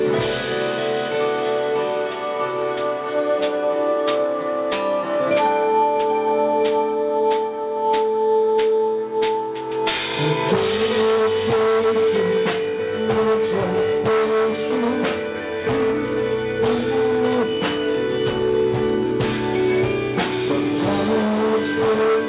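From start to finish the audio shows aliasing. The band stops hard at 4 kHz, which fits a drop to an 8 kHz rate with no anti-alias filter first. Content above 4 kHz has folded back into the band at unrelated pitches, roughly 20 dB under the main sound, so bright, hissy parts come out gritty and metallic. A properly filtered downsample would just sound dull, not harsh. Unlike codec warble, these false tones move in mirror image to the real ones.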